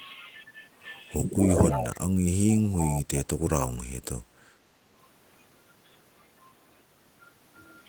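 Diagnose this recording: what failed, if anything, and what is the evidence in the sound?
Speech suppressed in double talk at the call-processing stage: the speech dips by up to about 25 dB at 1.52–2.05 s and about 15 dB at 3.04–3.28 s, showing as notches in the waveform envelope. The likely cause is an echo canceller ducking its own talker along with the loudspeaker echo while both sides spoke at once.

Echo leak at the call-processing stage: at 1.71–1.87 s and 2.5–3.02 s a copy trails the speech by 324 ms, about 10 dB down. On a spectrogram it appears as a fainter harmonic pattern shifted later in time, likely loudspeaker pickup that the echo canceller left behind.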